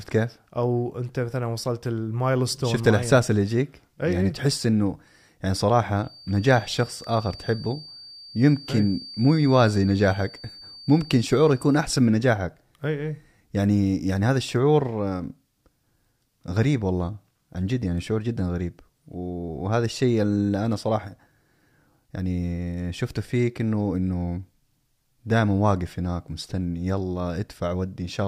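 It's a speech recording, and from 5.97 to 11.96 s a thin, steady feedback whistle at 4.6 kHz sits roughly 20 dB under the speech, swelling and fading slowly in level. That's likely a loudspeaker-to-mic loop hovering right at the edge of feedback without running away.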